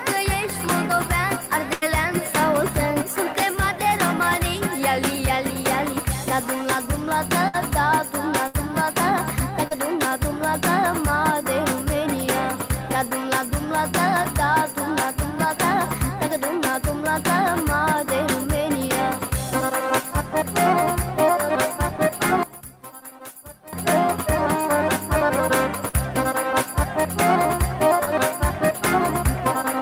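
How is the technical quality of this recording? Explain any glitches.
The recording has several transmission glitches and one short stretch where most of the sound collapses.

The burst of packet loss happens four times: 1.73 to 1.84 s, 7.48 to 7.55 s, 8.47 to 8.55 s and 25.89 to 25.95 s. Several consecutive packets failed to arrive in time, so the receiver extended the last audio it had and faded it down. You hear a held buzz or dying hiss for about 82, 58, 60 and 46 ms respectively. Then the sound picks up further along, with about 80, 60, 60 and 40 ms of the material skipped.

The short concealed packet loss occurs at 9.67 to 9.73 s and 28.05 to 28.09 s. Here only about 20 ms went missing each time. The decoder bridged the hole by synthesising a continuation from the preceding pitch or noise and cross-fading back into the real signal. That leaves a brief smear or wobble rather than an audible gap, and a very short sound can disappear inside it.

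From 22.43 to 23.73 s the level drops by about 18 dB, and what remains is faint. The likely cause is one channel inverted: one stereo side had its polarity flipped, so when both were summed to mono, everything common to the two channels cancelled. The centred content and low end mostly vanish, leaving only the faint difference between left and right.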